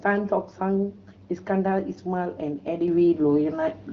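At 2.88 s the level steps up by about 6 dB and stays there to the end, speech and background noise rising together in one instant. That's a sudden gain jump, likely a gain setting applied abruptly with no ramp, while the HD Voice coding stays clear.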